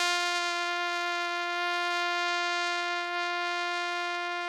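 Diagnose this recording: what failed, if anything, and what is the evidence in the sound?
Nothing failed; no audible fault anywhere in the music.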